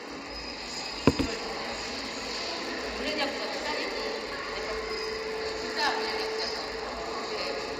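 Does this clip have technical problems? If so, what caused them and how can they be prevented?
Yes. A resampler restarted on every block runs through the whole clip, converting 16 kHz to 48 kHz in 10 ms blocks. Each block edge lacks neighbouring samples, so small errors repeat at 100 Hz, heard as a buzz present whenever sound plays. Keeping the resampler's filter state continuous across blocks prevents this.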